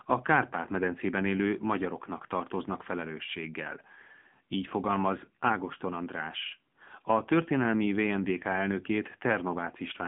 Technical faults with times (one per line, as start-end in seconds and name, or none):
0.00-10.07 AMR narrowband mobile codec